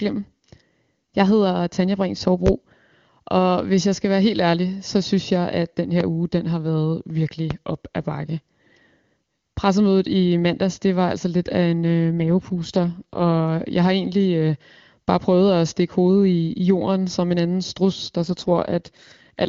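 At 2.46–2.50 s a sharp, single pop jumps out well above the speech, around 20 dB louder, and the talking carries on underneath it. Two more loud pops of the same kind follow, each lasting about 30 ms: one at 6.01–6.04 s, just before "uge den har været", slightly softer at roughly 15 dB above the speech, and one at 7.51–7.54 s, again around 20 dB up. A brief voltage step or spike is likely behind these, perhaps from a switch, static or a driver glitch, that was shaped by the circuitry and added on top of the audio.

From 12.20 to 13.35 s, ending just before "jeg har egentlig øh", the voice turns rougher and more synthetic with no gap and no loss of bandwidth, then clears again. This is an AMR rate drop. The AMR wideband (HD Voice) coding, otherwise clear at 23.85 kbit/s, falls back to 8.85 kbit/s, the kind of step a network orders on a weak radio link to spend bits on error protection. The same roughness returns from 18.23 s, just after "en anden strus der", and lasts until the clip ends at 19.48 s.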